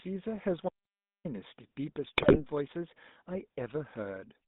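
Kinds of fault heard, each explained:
GSM full-rate codec: Across the whole clip the speech has a buzzy, gravelly roughness, plainly audible, and the band is squeezed to roughly 150 Hz to 3.7 kHz. Full-rate GSM rebuilds the voice from a vocal-tract model fed by coarse, regularly spaced pulses, which fits a 13 kbps stream.
GSM bit errors: From 2.17 to 2.41 s the speech breaks into squawks, pops and gargling. Corrupted bits reached the decoder and scrambled the filter, pitch and gain values, so the spectrum bends or the level jumps for each damaged frame through that quarter-second burst.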